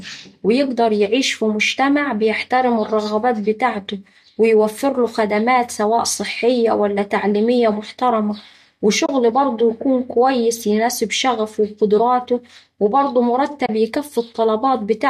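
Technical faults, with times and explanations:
9.06–9.09 s and 13.66–13.69 s, AAC frame loss with muting: two brief soft holes of about 30 ms each, the first just before "برضه يكون كويس يناسب" and the second right after "وقدراته وبرضه". The length fits three lost frames of about 10 ms from the light low-delay AAC coding, likely AAC-ELD. The decoder zeroes the missing spectrum, and the overlapping windows fade the sound out and back in. The result is a smooth dip, unlike a hard sample dropout.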